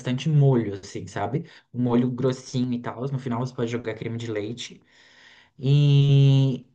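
No technical faults can be heard in the speech.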